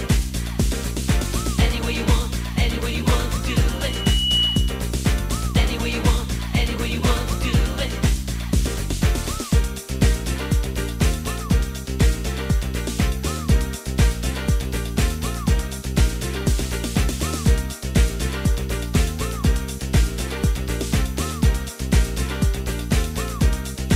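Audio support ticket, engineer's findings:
Rising whistle at 2.9 kHz, 3.73–4.93 s, swelling over most of a second to a few dB above the programme, then cut. Loudspeaker feedback squeal: mic picking up its own speaker, loop gain above unity at that frequency. Check mic placement and monitor gain.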